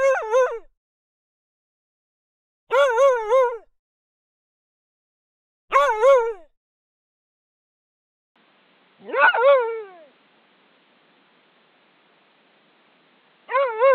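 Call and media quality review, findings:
Input switched to a poorer device, 8.36 s to end: abrupt narrowing to nothing above 4.4 kHz, no gap, level roughly unchanged, new noise floor about 40 dB down. Likely the capture path moving to a band-limited microphone or headset call profile.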